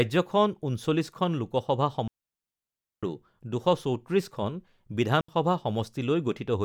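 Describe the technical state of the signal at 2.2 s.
At 2.2 s the signal is inside a digital wireless dropout running from 2.08 to 3.03 s: the receiver lost too much data and muted for about 0.95 s, leaving a clean near-silent hole with a quick fade and no noise burst, unlike an analog wireless dropout's hiss or crackle.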